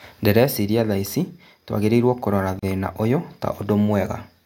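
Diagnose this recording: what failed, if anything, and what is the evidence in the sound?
The failure sits at the codec stage: a gap at a join of encoded pieces. At 2.59 s, right after "thaici tũagĩrĩirwo kũrora", the speech breaks off in a gap of about 34 ms. It resumes at 2.63 s with "thĩna ũyũ". Both edges are smeared by the codec. Two separately encoded segments were joined untrimmed. The encoder's start-up delay and last-frame padding stayed in. That leaves a gap, and the speech continues exactly where it stopped.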